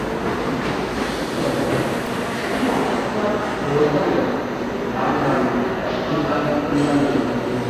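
Throughout, the sound is hissy and grainy, with nothing above 14.2 kHz, a hard ceiling on a spectrogram, likely from Vorbis compression at a low bitrate near 34 kbps. At 2.06 s, a repeated buffer produces a brief buzz: a 1.33 ms slice, fitting a 64-sample buffer, plays four extra times, visible as identical repeating cycles in the waveform.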